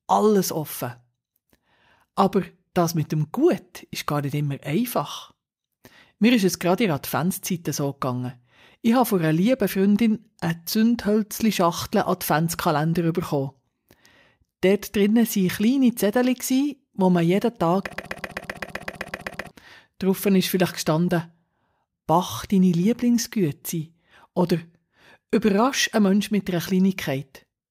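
The playback or stream likely stalled and resent its last buffered fragment, so from 17.93 to 19.51 s a 0.13 s piece repeats twelve times as a broken-record loop, losing that audio.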